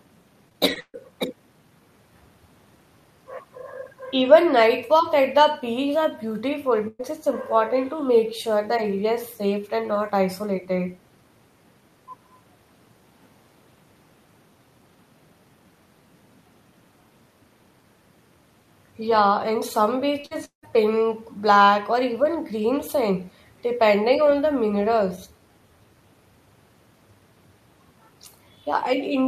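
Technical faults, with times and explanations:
0.49 to 0.96 s, repeated packet loss (robotic sound): four separate gaps in delivery removed about 200 ms of audio, the longest 137 ms. Each hole was patched by stretching the preceding sound, so nearly two fifths of this stretch is synthetic fill, giving a choppy, metallic, robotic texture with pieces missing.
6.88 to 7.02 s, burst of packet loss: a consecutive run of packets, about 120 ms' worth, failed to arrive in time. The receiver extended the last sound and let it fade, leaving a held, decaying buzz or hiss and a very brief dip to silence before the audio resumes with that portion gone.
20.20 s, short concealed packet loss: about 40 ms failed to reach the decoder. It was filled by continuing the previous sound and blended back in, heard as a brief smear or wobble.
20.26 to 20.33 s, burst of packet loss: immediately afterwards, another 40 ms of packets went missing. 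The concealment ran slightly longer than the lost audio, about 49 ms, so the same passage carries a second stretch of artificial continuation before real audio returns.
20.45 to 20.65 s, long network dropout: about 180 ms of audio is absent. The gap starts with an extended, fading continuation of the preceding sound, and that fill then gives way to roughly 110 ms of near silence. The likely cause is a stall in the network connection, after which the audio resumes further on without the lost portion.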